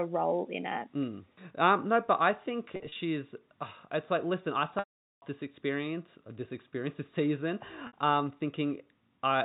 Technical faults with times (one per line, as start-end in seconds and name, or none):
2.73-2.95 packet loss with pitch repetition
4.79-5.22 packet loss with pitch repetition
7.87-7.93 packet loss with pitch repetition